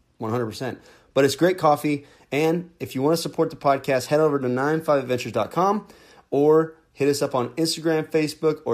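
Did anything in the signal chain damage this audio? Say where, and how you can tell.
No, nothing in the signal chain damaged this audio.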